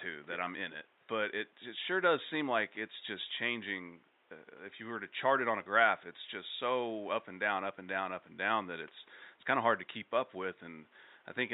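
Nothing in the system's chain has gone wrong in this speech recording, and the only thing under the voice is a faint bed of room noise sitting about 36 dB down, which belongs to the space the microphone was in rather than to any fault.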